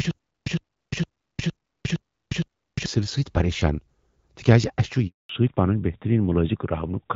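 A playback stall, likely with retries, is already under way when the clip opens: from 0 to 2.86 s the player keeps replaying its last 110 ms fragment and then running empty. The result is a stutter with silent gaps, with the same short burst returning six times every 460 ms and about 350 ms of dead digital silence between repeats.

At 5.07 s the call is handed between networks, and no speech frames arrive during the switch. This handover gap lasts 220 ms: the voice dies away within a few tens of milliseconds and stays silent until the new link starts at 5.29 s, and whatever was said in that window is lost.

From 5.29 s to the end, the call falls back from the AMR wideband (HD Voice) codec to narrowband AMR. Nothing above 4 kHz survives. The fallback to narrowband leaves the voice duller and rougher than the lightly coded wideband sound before it.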